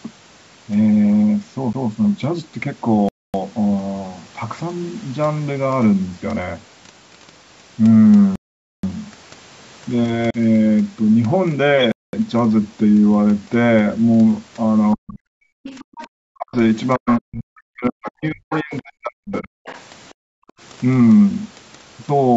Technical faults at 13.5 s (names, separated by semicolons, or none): none